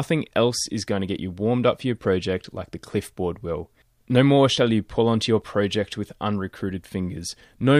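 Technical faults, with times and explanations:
2.44 s and 5.42 s: audio missing between chunks. The speech skips abruptly past roughly 20 ms, likely lost as the recorder switched between 3-second chunks.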